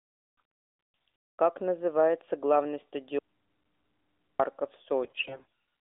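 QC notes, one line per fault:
3.19–4.39 s, audio dropout to a faint residue: speech cuts abruptly for 1.2 s, leaving only mains hum about 45 dB down. Likely a live input that lost its signal.
5.04–5.45 s, AMR bit errors: speech turns hoarse and gargly. Roughly a fifth of the less protected bits arrive flipped, so the pulses and spectral detail go wrong.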